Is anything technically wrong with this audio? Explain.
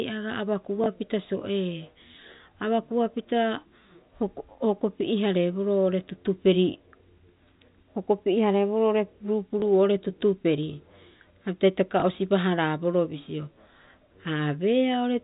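Yes, there are three brief hiccups from packet loss with the last packet repeated, at 0.84 to 0.86 s, 9.6 to 9.62 s and 12.0 to 12.02 s. Each gap is 20 ms, which fits a single lost packet being covered by replaying the previous one. That replayed chunk seldom lines up with the pitch, and each one comes across as a small blip. The telephone-band G.711 sound, topping out around 4 kHz, is normal for this line.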